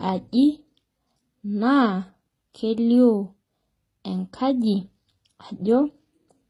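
Throughout the speech, nothing sits above 14.9 kHz, and two kinds of coding damage are heard together. This is likely transcoding between lossy codecs: the artefacts point to a low-rate MP3 followed by HE-AAC at about 20 kbit/s, re-encoding earlier artefacts while adding its own.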